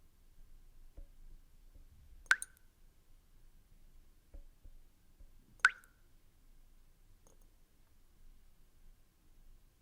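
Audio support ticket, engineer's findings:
No audible faults found.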